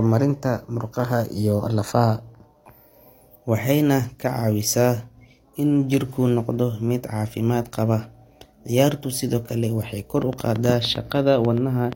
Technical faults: train of clicks

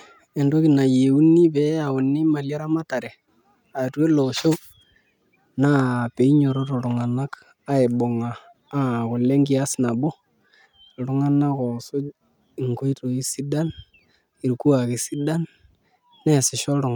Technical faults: none

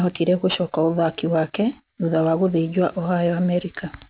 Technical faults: aliasing

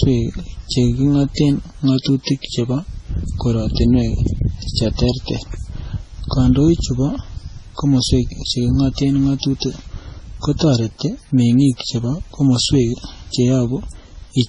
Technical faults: transcoding between lossy codecs

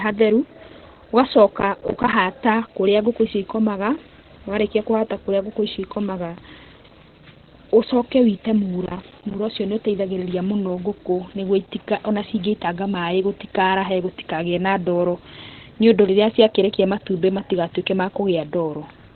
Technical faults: Opus compression

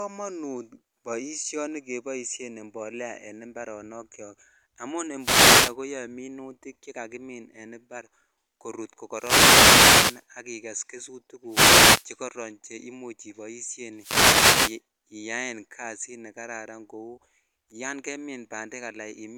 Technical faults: wireless microphone noise hit

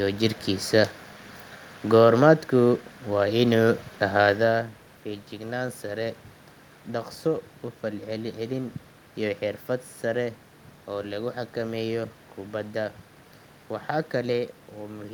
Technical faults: none

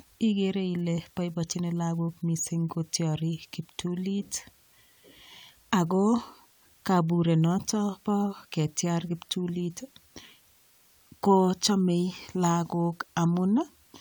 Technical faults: low bit depth with dither

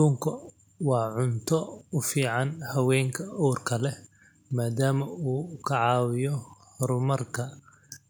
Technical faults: none

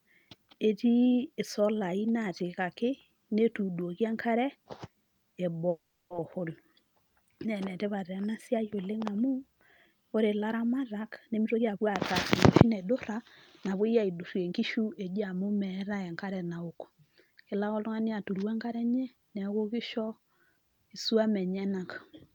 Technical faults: call audio freeze; jitter buffer speed-up

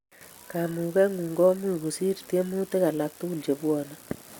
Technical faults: none

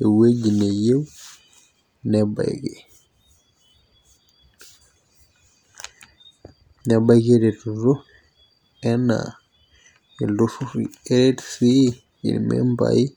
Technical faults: none

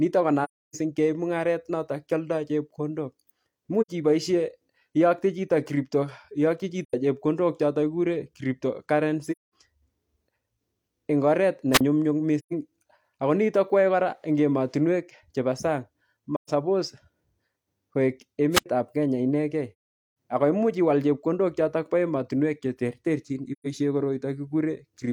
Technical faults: AAC frame loss with muting; wireless microphone squelch dropout

